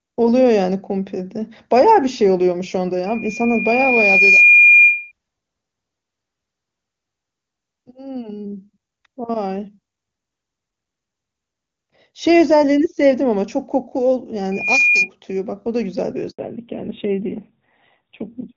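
From 3.06 to 5.12 s a loudspeaker feedback squeal appears: a steady 2.4 kHz tone swells over roughly a second and a half to around 10 dB above the speech. The microphone is picking up its own loudspeaker, and loop gain at that frequency exceeds unity. It recurs from 14.51 to 15.09 s, rising faster, in about a third of a second, to roughly 5 dB above the speech.

At 16.31 s a handover gap silences the speech for 80 ms while the call switches networks and no frames arrive.

From 16.39 s to the end, the call falls back to narrowband. Before this the speech is full and clear, which fits HD Voice at 23.85 kbit/s. Afterwards nothing is present above 4 kHz, and the speech sounds duller and rougher, consistent with a drop to a 7.4 kbit/s narrowband codec.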